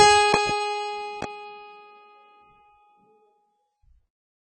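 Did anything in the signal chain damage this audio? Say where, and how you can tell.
Yes. AAC compression runs through the whole music clip. Nothing is present above 9.7 kHz, and the top of the mix is dull and smeared, with a warbling, fizzy texture on sustained tones. The codec stage is the likely cause. An AAC-LC encoder starved of bits lowered its bandwidth and quantised the remaining bands so coarsely that they thin out and shimmer. Damage this heavy fits a very low bitrate, around 16 kbps.

Loud pops sit on top of the music, which carries on underneath. There is a double pop between 0.34 and 0.53 s, peaking about 20 dB above the signal, and a single, softer pop at 1.22 to 1.26 s, about 10 dB above. The sharp, brief onsets point to a voltage spike entering the chain, likely in the analogue wiring or a driver glitch, that was then shaped by the circuits that follow.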